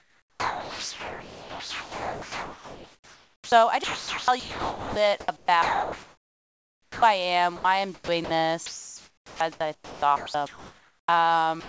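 From the start to 7.02 s the speech keeps breaking up. This is sound chopped by the voice detector, likely the sender's, toggling on and off so that about 6.1 s gets swapped for comfort noise.

At 7.56 s there's an 80 ms gap where the sound is dropped by the voice detector, likely because it read a quiet bit as background. Steady comfort noise fills the gap until sending resumes.

The choppiness returns from 7.94 to 8.30 s, with about 200 ms replaced, and again from 8.66 to 11.08 s, with about 1.9 s replaced. Both spans are likely the same detector chopping, on top of the 8 kHz-limited call sound.

At 11.60 s a final 52 ms is dropped and filled with comfort noise, likely another detector dropout. The room noise under it sits about 40 dB below the speech.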